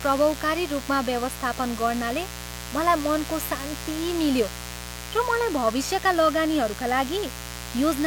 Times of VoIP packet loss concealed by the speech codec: none

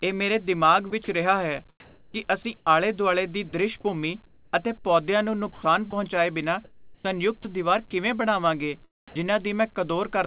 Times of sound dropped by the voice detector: 9.08-9.16

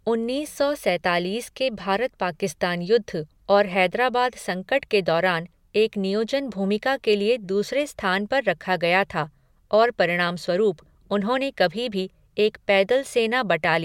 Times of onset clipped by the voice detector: none

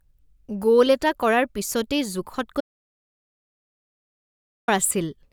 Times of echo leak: none

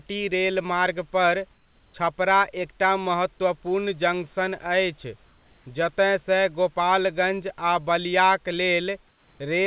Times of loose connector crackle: none

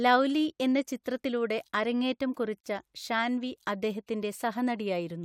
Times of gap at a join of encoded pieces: 2.60-2.64

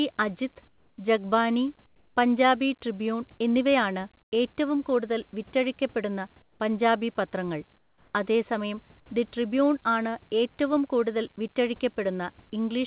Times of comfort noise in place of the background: 0.68-0.98, 1.86-2.16, 4.22-4.32, 6.42-6.60, 7.78-8.14

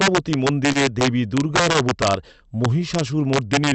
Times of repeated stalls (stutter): 0.55-1.85

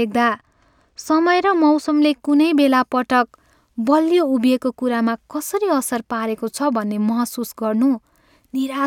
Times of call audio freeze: none

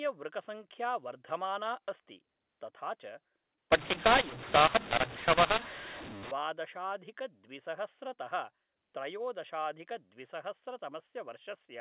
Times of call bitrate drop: none

